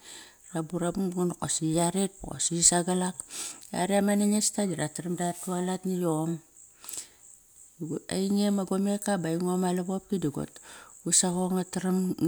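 Nothing in the recording stands out as a technical fault, so there's nothing here to flag.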